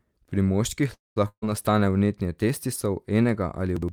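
Call audio freeze at 0.93 to 1.18 s: the speech stops and the last sound is stretched into a short buzz that fades out, leaving about 180 ms of silence in a gap of about 230 ms. When the speech returns, it picks up exactly where it left off. Nothing is lost, so the pause is inserted rather than cut. The likely cause is packets held up in transit until the jitter buffer ran dry.

Burst of packet loss at 1.28 to 1.44 s, just before "nastane vnetje testisov": a run of packets was lost or arrived too late to play, removing about 140 ms of speech. The receiver carried the last sound forward, turning it down until it fell silent for about 70 ms of the roughly 140 ms fill. The speech then resumes further along, skipping over the missing stretch.

Chunks out of order at 3.77 to 3.89 s: a 60 ms chunk of audio arrived or was written one chunk late, so it plays after the chunk that should follow it. 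No audio is missing, but the two pieces are swapped. The result is a brief scrambled moment with three abrupt joins, each of which can click, where the sound briefly jumps forward and back before continuing.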